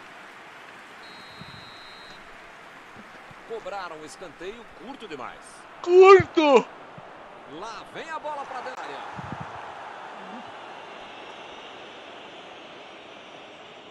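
At 8.75 to 8.77 s there is a CD skip: the pickup lost tracking and landed on a different turn of the disc's spiral. Playback mutes for around 20 ms, giving a short tick, and the audio resumes from a displaced point, so continuity breaks abruptly.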